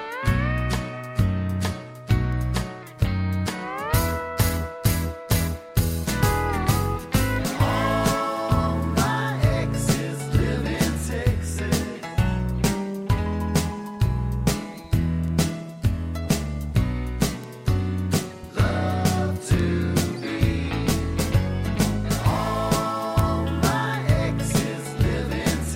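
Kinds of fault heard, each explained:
Word clock ticks: The receiving device is running on its own clock rather than locking to the incoming digital stream. Because the two clocks drift apart at a rate that points to around 30 parts per million, a single sample is slipped each time they cross. Each slip is heard as a sharp tick of uneven strength, recurring roughly every 0.7 s from 0.17 s to 25.35 s, about forty in all.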